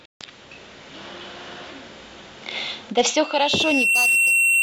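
At 3.06 s a loudspeaker feedback squeal starts and runs to the end of the clip. The microphone is picking up its own loudspeaker. A single 2.7 kHz tone swells over roughly a second, finishing about 5 dB louder than the speech.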